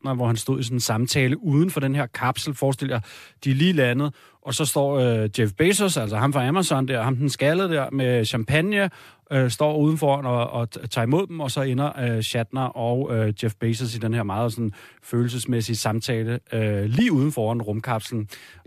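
Right at 16.99 s, just after "sådan følelsesmæssige samtale øh", there's a corrupt frame decoded: what sounds like a single damaged compressed frame got played as if it were fine. Flipped bits throw off the gains or codes, so energy lands at the wrong frequencies for only a few milliseconds. You hear it as a quick chirp, blip or burst of noise cutting across the speech, peaking fairly hot at about -10 dBFS, then it's gone.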